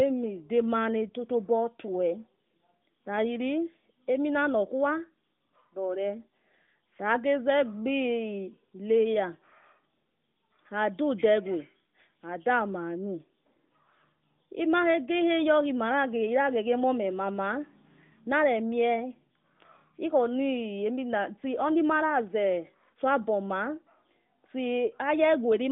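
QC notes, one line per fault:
No faults found; the speech rides an AMR narrowband mobile codec line at 12.2 kbps, band-limited to roughly 150 Hz to 3.6 kHz with only light coding texture.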